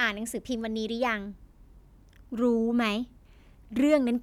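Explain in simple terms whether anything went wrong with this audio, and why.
Nothing went wrong with this speech recording, as no fault can be heard anywhere in it. The sound carries on steadily, with nothing out of place at any point.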